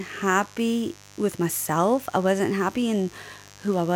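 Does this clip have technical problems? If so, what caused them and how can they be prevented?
Yes. Sharp switching spikes from a dimmer, a rectifier or a missing shield got into the signal path, firing twice in every cycle of the 50 Hz mains. That produces mains buzz: a steady, raspy tone built from 50 Hz harmonics that reach up into the kilohertz range. It runs through the whole speech clip, sitting well below the speech. To prevent it, keep dimmers and power supplies off the audio circuit and use properly shielded, grounded cabling.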